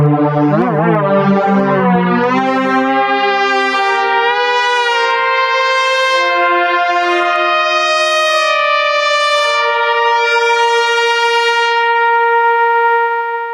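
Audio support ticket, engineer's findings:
Gain pumping throughout: a level swing of roughly 15 dB. Dynamics flattened, sound squashed. Likely input gain set far too high, with a fast limiter/compressor clamping every peak.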